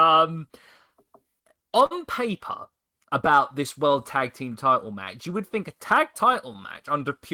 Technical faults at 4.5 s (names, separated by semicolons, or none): clock drift between sender and receiver; repeated timing corrections